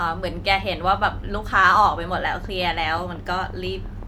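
A train of clicks runs from 1.75 s to 4.04 s: around fifteen sharp, near-identical pulses at a steady 5.7 per second, each about as loud as the speech itself. The regular spacing and uniform shape point to something repeatedly injecting an impulse into the signal path, likely electrical interference from nearby equipment or a faulty connection or power supply. It is heard as an even ticking laid over the speech and carrying through the gaps between phrases.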